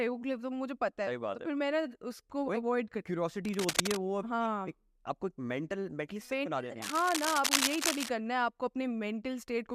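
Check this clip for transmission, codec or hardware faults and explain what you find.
Two bursts of cable scratch noise cut into the speech. From 3.45 to 3.97 s and again from 6.82 to 8.09 s, dense, ragged scratching sits roughly as loud as the speech itself. The likely cause is a worn cable, connector or control being moved, so its contact resistance flickers and injects uneven noise.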